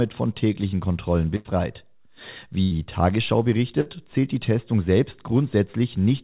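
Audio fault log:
1.36–1.47 s, 2.63–2.73 s, 3.81–3.88 s: burst of packet loss. Each time a short run of the speech never arrived. The receiver stretched the last sound into a fading buzz or hiss for 50 to 90 ms. Speech then resumes with 60 to 80 ms skipped. The last resumes at "zählt die". The narrow, sub-4 kHz call sound stays the same across each gap.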